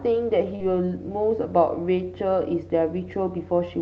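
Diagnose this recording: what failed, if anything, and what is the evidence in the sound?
Network stage: 40 ms of packets went missing, so short concealed packet loss extended the preceding sound across 0.55 to 0.62 s, leaving a brief smear.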